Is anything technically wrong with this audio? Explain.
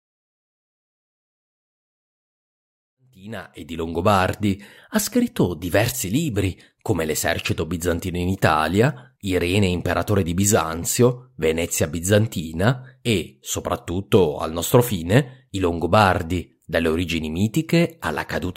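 No, nothing technically wrong.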